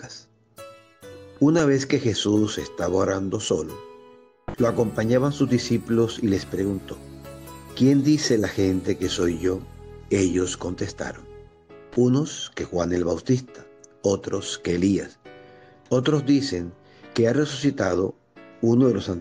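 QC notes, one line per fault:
No faults heard anywhere in the clip.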